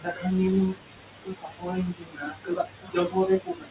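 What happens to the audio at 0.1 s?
At 0.1 s the sound sits inside a stretch of speech cut by the noise suppressor, running from the start of the clip to 0.28 s. The suppressor misread the opening speech as steady noise and pulled it down with the background, by about 19 dB at the deepest point, so the onset sounds swallowed and faint rather than starting cleanly.

The same moment also carries the noise suppressor artifacts present throughout. Frame-by-frame gain changes across bands make the residual room noise sink between the words and rise under them.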